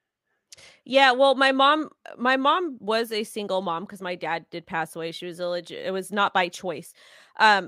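Nothing technical goes wrong anywhere in this speech recording, so there's nothing to flag here.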